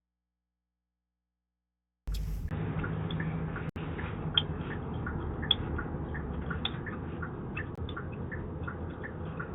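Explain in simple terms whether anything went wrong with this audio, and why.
The signal most likely dropped out before the recording began, leaving only a low mains hum until the sound cuts in abruptly at 2.08 s: an audio dropout to a faint residue.

At 2.49 s the system likely switched its input to a poorer device. After a brief silence of about 20 ms, the sound turns duller, with nothing above 3.8 kHz and new background noise.

A gap between stream segments happens twice, where the player fills missing time with silence: a 66 ms hole at 3.69 s and a 22 ms hole at 7.75 s.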